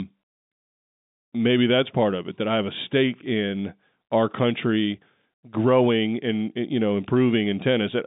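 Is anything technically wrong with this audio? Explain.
No, nothing is technically wrong with this speech. It has the narrow sound of G.711 telephone coding, with the line band running from about 150 Hz to 3.7 kHz and nothing above 3.8 kHz, which fits a standard 64 kbps mu-law phone channel.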